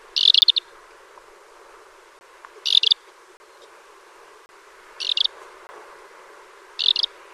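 Blocks of digital silence at 0.41, 2.19–2.21, 3.37–3.40, 4.46–4.49 and 5.67–5.69 s, 10 to 30 ms each: most likely unfilled buffers dropping to zero, giving a tick at 0.41 s and short holes at the others, flat waveform gaps and broadband spectrogram edges.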